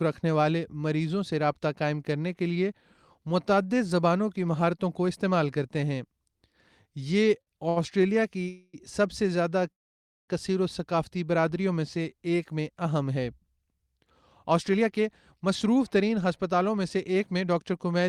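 At 7.41 s and 7.69 s there are short stalls from late packets. The jitter buffer emptied, so the last sound is held for 54 ms and 71 ms, then resumes. From 8.48 to 8.75 s a call audio freeze stretches the sound into a fading buzz for about 250 ms. From 9.72 to 10.30 s a second freeze falls almost entirely silent. Delayed packets likely caused both, and the audio continues where it stopped. A jitter buffer speed-up runs from 14.51 s to the end. The audio plays at 106% speed with unchanged pitch and sounds hurried, trimming about a fifth of a second.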